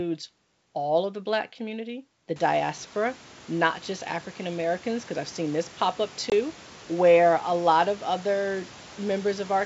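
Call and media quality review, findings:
Packet loss on ADPCM call, 6.30–6.33 s: roughly one 20 ms packet replaced by silence; decoder predictor desyncs, giving a hard-edged gap, then brief slight distortion as it resettles.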